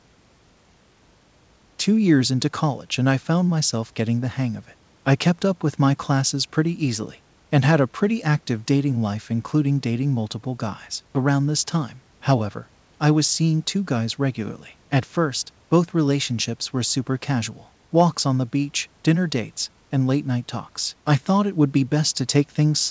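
No faults can be heard: the speech comes through the call path with nothing above 8 kHz, which fits a wideband codec such as G.722, and the room's background noise sits about 40 dB below the speech.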